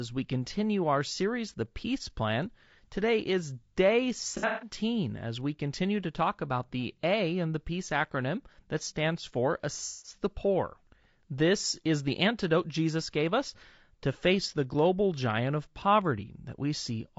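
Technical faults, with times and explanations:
Throughout: low-delay AAC compression. The speech sounds rough and grainy, with hiss filling the gaps between harmonics and a thin, synthetic-sounding top band. This is likely AAC-ELD at a low bitrate around 32 kbps, whose short frames smear pitch detail. On a spectrogram, harmonics look blurred and the upper band looks patchy.
4.37–4.70 s: AAC frame loss with concealment. Just after "is day" and before "as we continue to", about 210 ms of audio is missing, scattered over 240 ms, with the longest gap near 150 ms. The decoder fills these gaps by repeating the last good spectrum with scrambled phase, which sounds smeared and noisy. On a spectrogram this shows as flat, striped blocks.
9.86–10.15 s: AAC frame loss with concealment. Right after "acronym that stands for", about 180 ms is patched the same way, producing a phasey, washed-out smear instead of clear syllables. 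In the waveform the envelope turns smooth and static, and the spectrogram shows a frozen spectral slice.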